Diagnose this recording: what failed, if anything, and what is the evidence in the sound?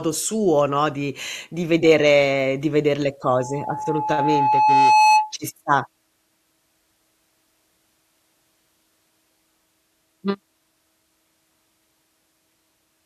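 What failed is the acoustic and analogue side: loudspeaker feedback squeal. Right after "vedere di veder le", at 3.23 s, a steady tone at 857 Hz appears and swells over about two seconds, ending up roughly 10 dB above the speech before it cuts out at 5.33 s. The microphone was hearing the loudspeaker it feeds, and at that one frequency the loop gain crept past unity, so the tone kept feeding itself until it stopped.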